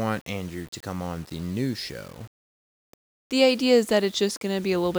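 Low bit depth without dither runs throughout the speech: a grainy distortion that tracks the voice, roughest on quiet syllables and trailing sounds, sitting about 30 dB below the signal. This likely comes from rounding to very few levels without dither, which fits about 7 bits.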